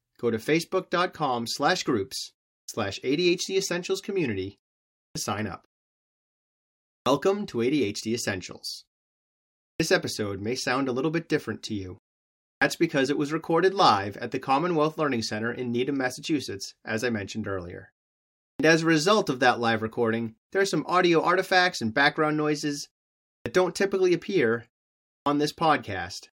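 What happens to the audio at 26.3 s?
Nothing goes wrong at 26.3 s; the speech audio is intact at that moment.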